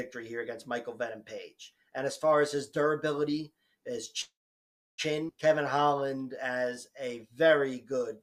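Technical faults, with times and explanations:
4.21–5.01 s, call audio freeze: the sound stops and a brief decaying tail of the last sound trails off into about 0.66 s of silence before playback resumes where it left off. That points to a likely cause of delayed packets draining the jitter buffer, inserting roughly 0.77 s of gap without losing audio.
5.28–5.32 s, skip ahead: playback jumps forward with only a very short filler at the join, and about half a second of audio is gone. The receiver appears to have dropped this stretch while later audio was already waiting, pulling the delay back down by a similar amount.
5.63–8.10 s, jitter buffer slow-down: the audio runs at about 93% speed with unchanged pitch, sounding slightly stretched and drawn out. Repeated pitch periods and pause fragments add 186 ms over this stretch, rebuilding the buffer's reserve as it ran low.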